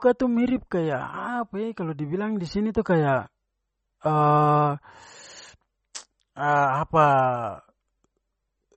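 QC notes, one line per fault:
Throughout, MP3 compression: the speech stops sharply at 8.4 kHz and sounds plainly watery and swirly, with smeared onsets. This is likely a bit-starved MP3 encoder cutting the treble and flickering weak frequency lines between frames, which fits about 32 kbps.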